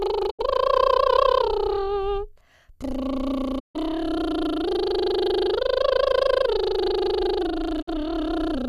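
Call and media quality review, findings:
Digital broadcast dropout in the music at 0.29–0.41 s, 3.58–3.77 s and 7.81–7.89 s. Receiver mutes with a quick 20 ms fade, no concealment. Programme resumes further on; the missing audio is lost rather than delayed.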